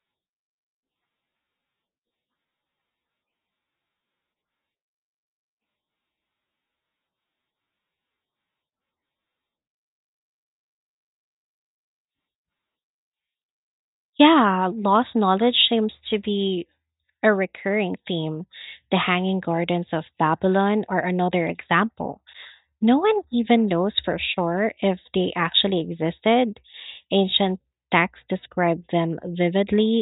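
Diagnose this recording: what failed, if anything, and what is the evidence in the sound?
No fault can be heard.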